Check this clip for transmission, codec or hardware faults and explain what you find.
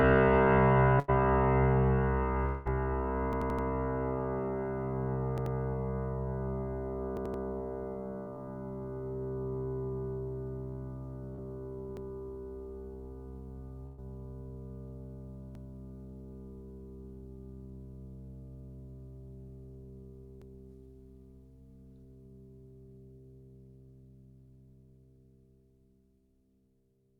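The music clip shows network losses and device buffer repeats.

A burst of packet loss at 0.99 s and 13.86 s blanks about 80 and 120 ms. The receiver extends the last sound, so it smears and fades before resuming further on.

From 2.46 to 2.67 s, a held, fading tone bridges about 200 ms of missing music. This is likely a long network dropout, too brief to fall to silence.

Repeated buffer faults occur at 3.33, 5.38, 7.17, 11.97, 15.55 and 20.42 s. The same 85 ms piece replays up to four times, which fits a 4096-sample buffer, giving a stutter with hard joins.

Short concealed packet loss at 11.35 s fills a 20 ms hole with continued sound, heard as a brief smear or wobble.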